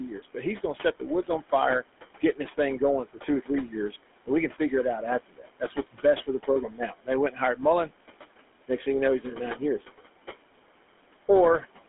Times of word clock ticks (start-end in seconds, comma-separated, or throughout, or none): none